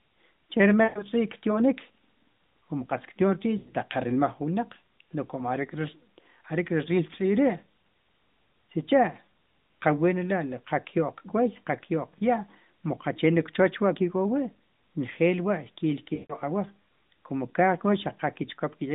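Narrowband phone speech in which the sound smears, stretches and fades toward silence at 0.84 to 1.03 s, at 3.58 to 3.69 s just before "taq qa", and at 16.14 to 16.36 s just before "ke awaj komu". These are lost AMR speech frames: the decoder repeated its last good settings with falling gain across gaps of about 120, 100 and 160 ms, consistent with runs of 20 ms frames failing their checks.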